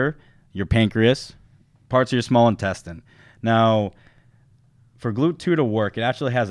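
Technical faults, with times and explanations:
No technical faults can be heard at any point in the speech, and the signal stays intact throughout.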